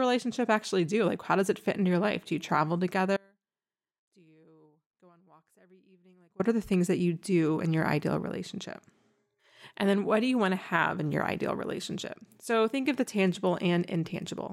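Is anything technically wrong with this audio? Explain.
Yes. From 3.17 to 6.40 s the speech drops out abruptly for about 3.2 s, leaving a faint residue roughly 35 dB down, likely from a broken feed into a still-live downstream path.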